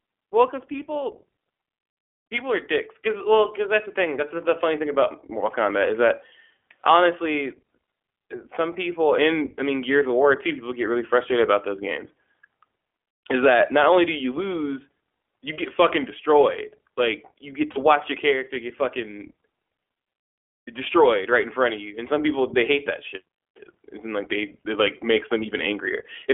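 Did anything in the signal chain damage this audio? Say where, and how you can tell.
Yes. Throughout, the speech sounds thin and rough, band-limited to 300 Hz–3.4 kHz: the iLBC codec, with plainly audible damage at the codec stage, fitting its 20 ms frame mode.

Brief buzzy, held-vowel patches at 15.54–15.57 s and 17.72–17.78 s are lost iLBC frames on the network, concealed by repeating the last pitch cycle with noise.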